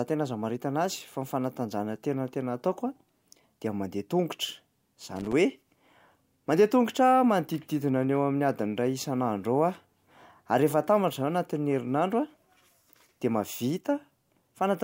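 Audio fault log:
5.16–5.33 s, loose connector crackle: a brief, ragged burst of scratchy crackle lasting about 0.16 s breaks into the speech. A worn or dirty contact was briefly making and breaking, chopping the signal on and off.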